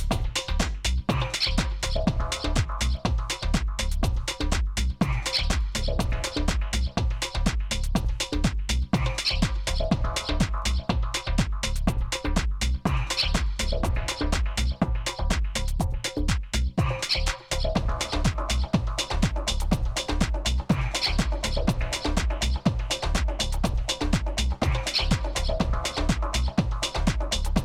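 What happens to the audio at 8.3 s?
Nothing goes wrong at 8.3 s; the audio plays through that moment intact, with no dropout, click, distortion or other fault.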